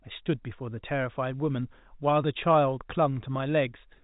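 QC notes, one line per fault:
No faults heard; the telephone-band audio sounds normal.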